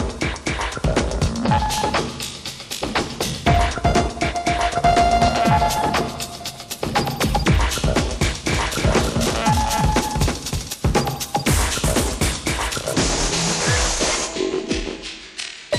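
From 8.51 to 10.73 s there is a doubled audio track. A second full-band copy trails the original by roughly 300 ms, about 5 dB quieter, with no decay or room colour, and it cuts in and out abruptly, likely from an edit leaving two misaligned copies.

From 12.93 s to the end, the section runs at the wrong speed, 0.727 times the original rate. Speed and pitch drop together, so the audio turns slow and deep, roughly five semitones lower, consistent with playback against an incorrect clock.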